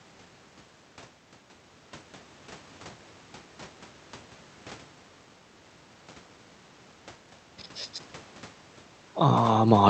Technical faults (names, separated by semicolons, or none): none